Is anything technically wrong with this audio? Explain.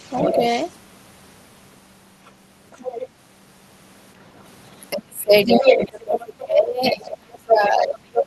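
Yes, two echo-canceller faults. Other side's voice leaking through at 0.00–0.76, 2.25–2.31, 2.71–3.07, 5.46–6.04 and 6.84–6.91 s, likely loudspeaker echo left uncancelled; it sometimes reaches the talker's own level. Speech suppressed in double talk at 0.33–0.44 s, 4.93–5.68 s and from 5.86 s to the end, likely the canceller ducking both voices during overlap; the talker drops by up to about 25 dB.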